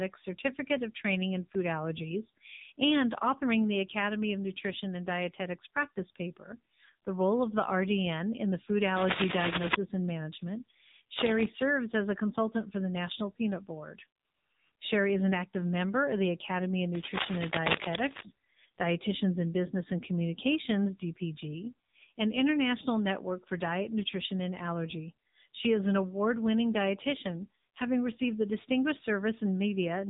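The speech has passed through the AMR narrowband mobile codec at a low mode, which fits about 6.7 kbps. Its vocal-tract model with sparse pulses discards everything above 4 kHz and leaves the voice muffled, heavily buzzy and synthetic throughout.

At 8.95 to 9.75 s, 11.17 to 11.49 s and 16.95 to 18.25 s, a worn cable or connector being moved likely causes cable scratch noise. Its jumping contact resistance adds dense rustling bursts, roughly 5 dB above the speech in the first and last, quieter in the second.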